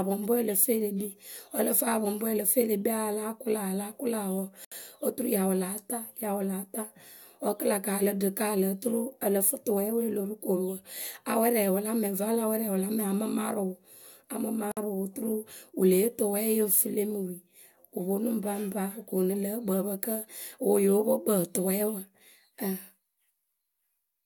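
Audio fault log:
4.65 to 4.72 s and 14.72 to 14.77 s, gap at a join of encoded pieces: the speech just drops out for about 69 ms and then 54 ms, ten seconds apart, with edges smeared by the codec. It sounds like the audio was encoded in ten-second chunks and stitched together untrimmed, so each join keeps the encoder's start-up silence and last-frame padding. After each hole the speech picks up right where it left off.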